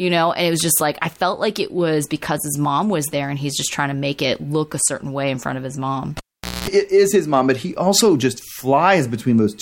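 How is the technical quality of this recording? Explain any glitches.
The recording has one clear glitch, a cable pulled and plugged in, from 6.17 to 6.68 s. The live lead is yanked, causing a pop and about 0.46 s of near silence. Within that gap, 60 Hz mains buzz lasts 0.22 s while only the plug tip touches, before a second pop brings the speech back.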